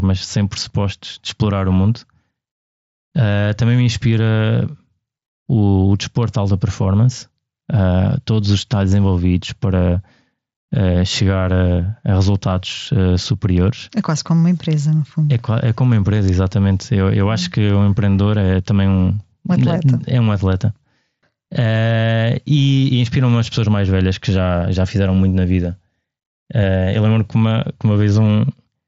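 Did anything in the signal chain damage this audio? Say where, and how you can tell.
No, no stage in the chain damaged this speech.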